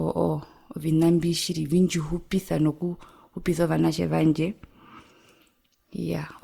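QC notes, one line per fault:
throughout, generation loss: speech sounds swirly, hollow and smeared, with blurred onsets, likely from about seven rounds of lossy re-encoding, consistent with Opus at 64 kbit/s.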